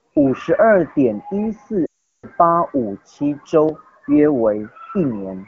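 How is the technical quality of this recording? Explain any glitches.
The recording has one clear glitch in wideband phone-quality speech. The rest carries the light coding texture of a mid-rate AMR wideband (HD Voice) codec.

From 1.85 to 2.26 s, lost AMR speech frames cause a gap of roughly 0.4 s. The decoder repeats its last good pitch and vocal tract settings at falling gain, so the sound drops to near silence within two frames, then returns briefly weak. A plain dropout would cut off abruptly instead.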